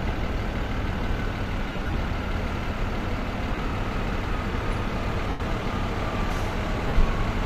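Lost LE Audio frames at 1.68 to 1.94 s (about 135 ms scattered over 255 ms, runs near 30 ms), 3.55 s (22.5 ms), 5.29 to 5.40 s (105 ms) and 6.88 to 6.94 s (52.5 ms): the decoder refills gaps with the last spectrum under random signs, smearing tones into noise that fades toward silence.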